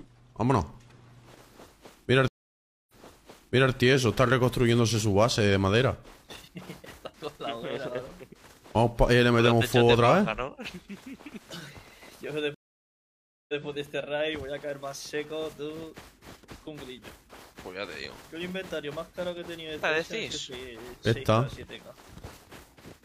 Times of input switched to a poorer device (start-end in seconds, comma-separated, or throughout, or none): none